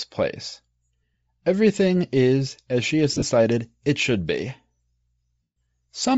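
Throughout the speech there is a breathy, grainy edge and a noisy, thinned upper band, plainly audible, likely from Bluetooth LC3 compression at a low bitrate, around 32 kbps with 7.5 ms frames. The codec discards upper-spectrum detail and fills the gap with noise.

Lost LE Audio frames cause three dropouts, each concealed by repeating the last spectrum with scrambled phase. At 1.14 s there is a brief smear. From 3.12 to 3.23 s, just after "is as she has", short gaps scatter across about 105 ms, the longest about 30 ms. From 5.43 to 5.56 s a longer loss smears, then fades toward silence.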